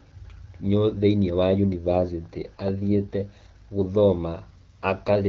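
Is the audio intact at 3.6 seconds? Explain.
No. At 3.6 seconds the speech is inside an AMR rate drop that runs from 1.41 to 4.07 s. The voice turns rougher and more synthetic, which fits the network cutting the AMR-WB rate from 12.65 to about 8.85 kbit/s to spend bits on error protection. What sets it apart from packet loss or a narrowband fallback is that the audio never breaks into a gap and the bandwidth stays full; only the texture degrades until the rate recovers.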